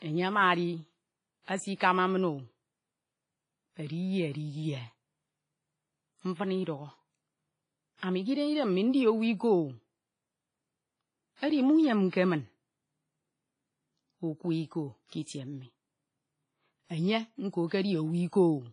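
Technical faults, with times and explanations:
Throughout: WMA compression. The speech has the ringing, washy quality of a transform codec run at a low bitrate, with a hiss that swells and fades along with the speech. Nothing remains above 10.5 kHz, which suggests a WMA encode around 24 kbps. Quantisation noise is spread over long blocks, weak spectral lines are dropped to zero, and the damage is heavy, leaving the top end dull.
1.42–1.48 s, 7.98–8.03 s, 15.08–15.12 s: pre-echo. Each of these attacks is preceded by a brief hiss, 56 ms long at the first and 45 ms at the other two. The last one comes just before "itie mi". The codec sizes its noise for the loud attack and then spreads it across the whole block, so the quiet moment before the onset fills with hiss and the attack itself sounds softened and smeared.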